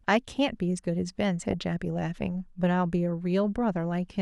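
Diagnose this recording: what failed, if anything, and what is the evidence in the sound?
Short blips of noise sit over the speech at 1.51 to 1.54 s and again at 3.27 to 3.36 s. This is DAB burbling, a codec-stage fault fed by weak reception. Bit errors, on the order of a tenth of a percent, slipped past error correction into the MP2 audio data. The corrupted samples put short blips of noise into single sub-bands.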